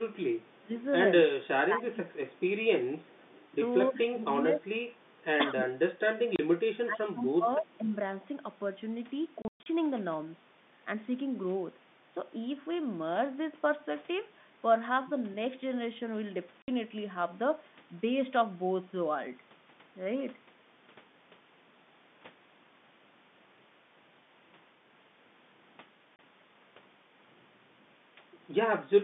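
From 0.41 to 0.59 s, and again from 3.02 to 3.47 s, a faint delayed copy of the speech trails the original by about 246 ms. This is an echo leak, likely from a far-end loudspeaker whose echo canceller let some of the pickup return. It sits very low, about 35 dB down in the first stretch and about 30 dB down in the second. On a spectrogram it shows as a weak ghost of the harmonic pattern, shifted a quarter second later.

Speech is also suppressed in double talk, likely because the echo canceller could not tell the talker apart from loudspeaker echo while both sides spoke and turned everything down. This happens at 0.60 to 0.72 s, 1.37 to 2.32 s, 3.90 to 4.66 s, 5.54 to 6.19 s and 6.81 to 7.94 s. The level sinks by roughly 20 dB at its deepest, and by about 15 dB in the 3.90 s stretch, so words fade and thin out. The waveform envelope caves in over these spans, and the spectrogram dims, losing the upper band first.

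Packet loss filled with silence cuts hard holes into the sound at 6.36 to 6.39 s, 9.42 to 9.66 s, 16.62 to 16.68 s and 26.16 to 26.19 s. The gaps run 30 ms, then 60 ms, with the 30 ms step pointing to 30 ms packets. Around 9.4 s, 180 ms is lost in scattered pieces, the longest run 120 ms. Each hole is a flat line in the waveform and a blank vertical slot on the spectrogram, with hard edges.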